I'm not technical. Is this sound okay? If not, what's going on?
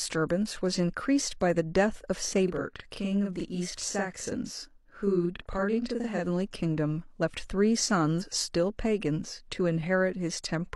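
No. From 2.48 to 6.24 s there is a channel delay (doubling). One side arrives 40 ms late, so the speech sounds doubled. At 8.18 to 8.24 s, damaged data in a compressed stream makes a short glitch.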